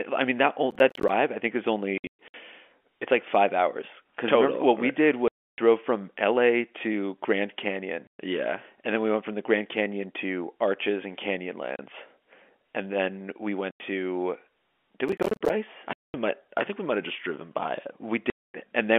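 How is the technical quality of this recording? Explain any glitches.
The recording has two recurring faults: bursts of crackle and a series of silent dropouts, all heard through a telephone-band channel limited to roughly 250 Hz to 3.4 kHz.

Processor overload crackle occurs at 0.71 to 1.09 s and at 15.09 to 15.50 s. The processor missed a run of deadlines for small audio buffers, around 10 ms each, and each missed buffer became a hard-edged silent gap. The second burst is longer and denser, so both are heard as gritty tearing over the speech.

Packet loss filled with silence appears at 1.98 to 2.34 s, 5.28 to 5.58 s, 8.07 to 8.18 s, 11.76 s, 13.71 to 13.80 s, 15.93 to 16.14 s and 18.30 to 18.54 s. The network lost packets and the receiver played silence in their place. The holes are multiples of 30 ms, which fits 30 ms packets, and they last up to 300 ms. Their edges are abrupt. In the first event, 240 ms of loss is scattered across 360 ms, so the speech there sounds chopped rather than cleanly cut.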